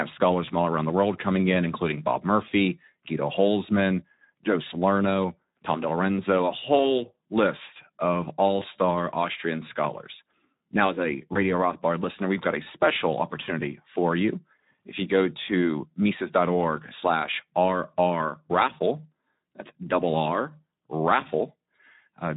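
Throughout, the Speex codec at about 11 kbps leaves the speech plainly damaged. Starved of bits for the excitation signal, the voice comes out noisy and hoarse. Any detail above 8 kHz is only shaped noise fill rather than real harmonic content.

At 0.45, 6.77, 8.59 and 11.33 s, VoIP packet loss concealed by the speech codec covers a single lost 20 ms frame. The decoder extends the last pitch and filter into a brief, fading smear. Distortion lingers for tens of milliseconds before the speech recovers.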